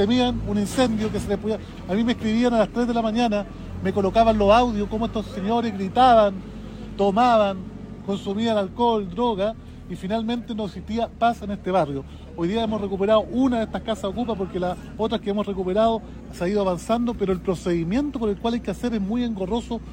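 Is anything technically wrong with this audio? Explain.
No, no technical faults heard.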